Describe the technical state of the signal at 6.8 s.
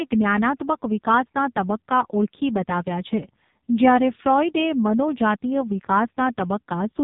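At 6.8 s, as throughout, the AMR narrowband mobile codec leaves nothing above 3.8 kHz and a heavily buzzy, synthetic tone from its pulse-driven vocal-tract model. That fits a very low bitrate near 5.15 kbps, unlike a plain low-pass cut.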